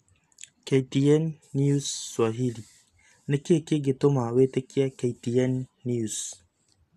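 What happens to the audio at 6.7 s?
The speech sounds dull and gurgly, with nothing above 12.2 kHz, as throughout the clip; likely MP2 compression at a low bitrate, around 80 kbps.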